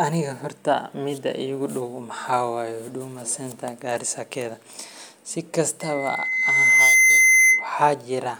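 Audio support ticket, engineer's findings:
Loudspeaker feedback squeal, 5.81–7.71 s. Steady 2 kHz tone swelling over about a second, peaking around 10 dB above the speech. Probable component: mic-to-loudspeaker acoustic path. The mic picks up its own speaker output, and loop gain exceeds one at 2 kHz, so that frequency builds itself until the loop is broken. Check mic placement and speaker aim relative to the mic, and reduce gain or notch near 2 kHz.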